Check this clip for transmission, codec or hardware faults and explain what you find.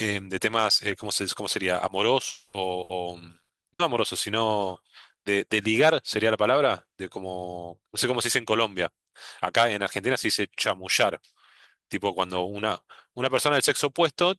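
Transmission faults are present: one long dropout and three short packet-loss bursts, all clustered early in the speech.

From 2.29 to 2.56 s, a long network dropout likely interrupted delivery. The receiver extended the last sound as a fading buzz or hiss for about 240 ms before speech resumed, with that stretch missing.

Bursts of packet loss at 2.83 to 2.92 s, 3.43 to 3.52 s and 3.73 to 3.82 s each drop about 60 ms. Each gap is filled by a briefly held, fading sound before the speech skips ahead.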